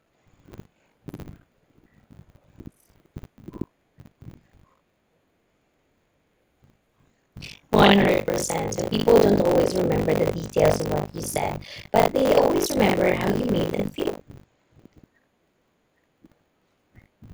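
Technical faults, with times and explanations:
Throughout, buffer tearing: the writer and reader slipped, so about a third of every 20 ms period replays speech some 70 ms old, buzzing robotically at 50 Hz.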